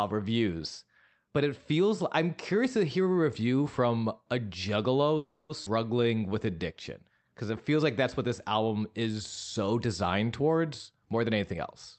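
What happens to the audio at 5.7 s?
At about 5.65 to 5.68 s the speech jumps forward. Roughly a fifth of a second of speech is gone, and the two sides are butted together with only a sliver of fill, so the flow lurches with almost no audible gap. This is a skip ahead. Audio was dropped, either on the way or by the call's jitter buffer when it overflowed, while later material was already waiting, and playback resumed from that later material. That cut the playout delay by around 150 ms.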